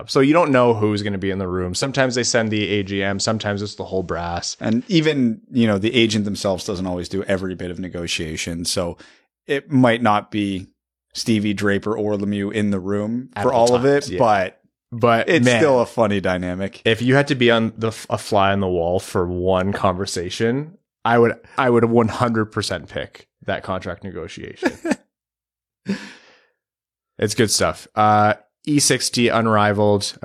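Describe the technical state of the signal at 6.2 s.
At 6.2 s the speech signal is intact, with no audible fault at that moment.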